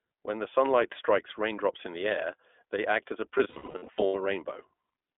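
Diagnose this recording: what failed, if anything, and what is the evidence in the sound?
The codec stage is at fault throughout. This is the iLBC codec. The band runs only from about 300 Hz to 3.5 kHz. The speech is clear but rough and slightly synthetic. That plainly audible roughness fits the 15.2 kbps mode, with each 20 ms frame coded independently.

The network stage fails from 3.38 to 4.16 s, just after "they act as a". These are lost iLBC frames. About 460 ms goes missing in short runs, the longest around 70 ms. The decoder repeats the last pitch cycle mixed with noise. Each gap becomes a brief buzzy, held vowel.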